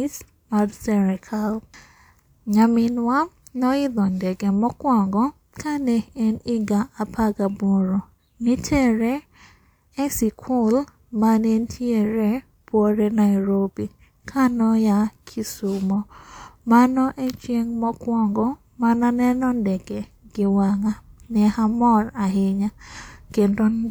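Listening through the speech, nothing technical stood out.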